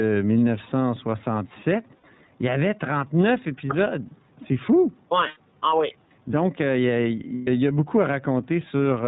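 Right through the speech there's some gain pumping: the faint background swells up in the pauses and dips by roughly 5 dB whenever the talker gets loud, so the level feels squashed. The likely cause is input gain set too hot with a fast limiter clamping every peak.

The whole clip also has the iLBC codec's sound. Everything stops at 4 kHz, and the voice comes across slightly rough and synthetic, with clearly audible coding damage. That character fits iLBC's 30 ms, 13.33 kbps mode.

Then there are three spots of lost iLBC frames, where the decoder fills the hole by repeating the last pitch cycle with some noise mixed in. You hear a brief held, buzzy vowel from 1.97 to 2.04 s (60 ms, consistent with two frames), from 5.28 to 5.38 s (90 ms, about three frames), and from 7.35 to 7.48 s (120 ms, about four frames). Because each frame decodes independently, the voice snaps back straight away after each one.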